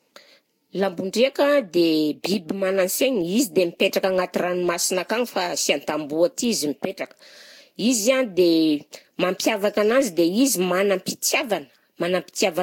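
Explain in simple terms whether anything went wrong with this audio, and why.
Something did go wrong: the speech has generation loss from start to finish. It sounds swirly and a bit hollow, consonant starts are smeared, and nothing comes through above 16.6 kHz. It's likely been saved through a lossy codec several times, each pass stacking up damage.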